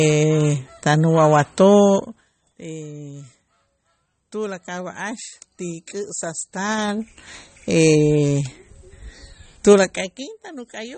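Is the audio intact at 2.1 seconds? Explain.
No. From 1.94 to 2.30 s a rapid ticking, zipping texture rides on the speech as its level drops by roughly 20 dB. This is zipper noise: the gain falls in 2 dB steps, around 30 per second, with no smoothing, and each abrupt step leaves a small click.

Underneath, the speech sounds watery and swirly, with nothing above 8.4 kHz. That is likely MP3 compression at a low bitrate, fitting about 32 kbps, where the encoder cuts the treble and zeroes weak frequency lines that flicker between frames.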